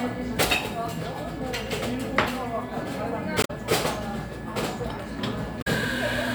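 A recording of sounds with damaged data in a compressed stream at two points. Each is a brief garbled burst lasting about 0.1 s, at 3.41 to 3.50 s and at 5.58 to 5.67 s. Corrupted bytes there made the decoder misread frames and lose sync.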